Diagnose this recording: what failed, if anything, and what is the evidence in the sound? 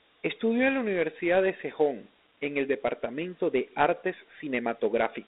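Dialogic VOX ADPCM coding at the codec stage, throughout the speech. The band runs about 250 Hz to 3.7 kHz with nothing above 3.8 kHz, which fits 4-bit ADPCM at 32 kbps. Coarse step-size quantisation adds gritty hiss tracking the speech, seen on a spectrogram as grainy noise under a flat ceiling.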